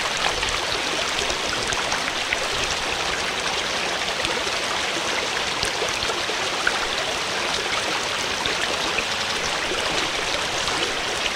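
At 9.13 s, running to 9.32 s, there are repeated frames. A 92.9 ms stretch of compressed audio, which fits a block of about four frames, is played two extra times, adding 185.8 ms. The result is a brief stutter. On a spectrogram the same slice of pattern appears side by side. The waveform shows an identical shape recurring.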